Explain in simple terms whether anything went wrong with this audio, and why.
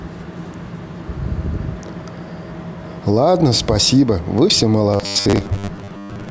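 Something goes wrong near the end. From 4.92 s to the end at 6.31 s, the speech turns into a stiff, metallic buzz at 100 Hz. This is robotic sound from repeated short buffers. The likely cause is audio arriving too slowly, so 10 ms snippets get replayed over most of the stretch.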